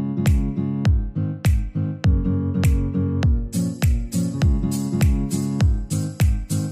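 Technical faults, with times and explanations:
No technical faults can be heard in this clip. Nothing in the audio calls for a time or an explanation.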